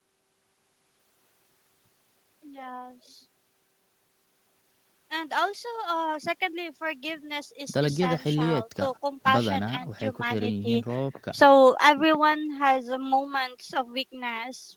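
No technical faults can be heard anywhere in the speech recording.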